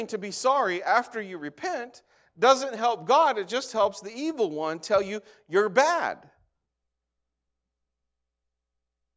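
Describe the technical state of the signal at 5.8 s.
At 5.8 s the speech signal is intact, with no audible fault at that moment.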